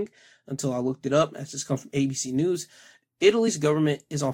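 It's a short speech clip with one glitch: compressed frames skipped at about 3.47 s. The decoder seems to have dropped a few whole frames, either missing from the file or thrown out as corrupt, so the audio jumps ahead by something like 70 ms. That's about three frames' worth. At the join, a little of the audio vanishes.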